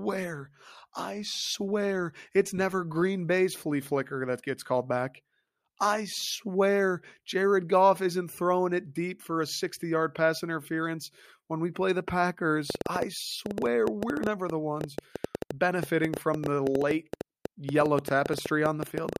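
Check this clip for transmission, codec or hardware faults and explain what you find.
One fault stands out: a train of clicks running from 12.70 s to 19.17 s, through the final stretch of speech. It sounds like sharp, similar-shaped ticks at an uneven pace of about 8.4 per second, roughly fifty in all. They are much louder than the voice, around 10 dB above it, and they keep ticking through the pauses. The likely cause is electrical interference from nearby equipment or a faulty connection or power supply injecting repeated pulses into the signal.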